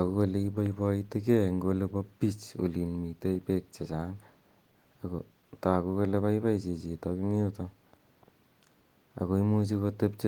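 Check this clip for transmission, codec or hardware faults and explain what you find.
Nothing in the clip points to a fault. The Opus voice compression runs in its hybrid fullband mode at 20 kbps, keeping the speech's content up to about 20.2 kHz with only light coding damage.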